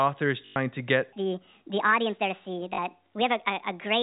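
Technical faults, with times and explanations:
0.46–0.56 s and 2.74–2.78 s: packet loss with last packet repeated. About 100 ms goes missing first, then 40 ms, which fits five and two 20 ms packets. The receiver replays the last packet. The repeats buzz at about 50 Hz, a short robotic stutter.
1.13–4.03 s: section at the wrong speed. From here on the speech runs 1.55 times too fast. Speed and pitch rise together, about seven semitones up, so the voice sounds high and hurried. The likely cause is playback fitted to the wrong clock.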